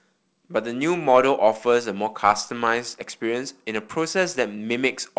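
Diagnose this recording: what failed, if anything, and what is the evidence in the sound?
Nothing failed in this recording; the speech comes through the G.722 wideband telephone path as that coding would deliver it.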